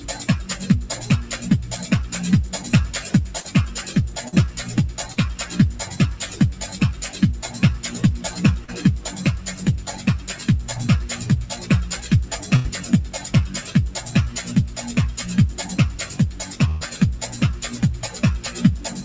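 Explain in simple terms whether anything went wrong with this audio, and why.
Three problems can be heard. The first is a noise suppressor applied to music or sounds. A filter built for speech treats held tones, room ambience and reverb as noise and keeps pulling them down, so the level pumps up and down throughout while sudden attacks get through.

The second is short concealed packet loss at 3.40, 4.28, 5.12 and 8.64 s. Each time, about 40 ms of audio never arrived. The receiver patched the hole by extending the last sound, heard as a brief smear or wobble.

The third is a burst of packet loss at 12.56 s and at 16.68 s. These are longer gaps, of about 80 ms and 120 ms. The receiver stretched the previous sound while fading it, then jumped ahead, so that stretch of audio is gone.

All of this passed through a G.722 call link, which stops the sound above 8 kHz.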